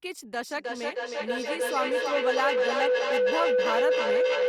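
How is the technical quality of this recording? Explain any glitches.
The quality is poor because of a feedback howl that takes over from 0.51 s and runs to the end. A microphone is picking up a loudspeaker playing the same call, and each trip around that loop comes back louder instead of dying away. The loop's favoured frequency wins out, so you get a tone around 500 Hz built from repeats roughly every third of a second, peaking about 6 dB above the speech.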